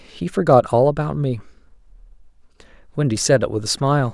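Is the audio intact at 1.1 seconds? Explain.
Yes, the audio is intact at 1.1 seconds, with no dropout, click, distortion or other fault audible at that moment.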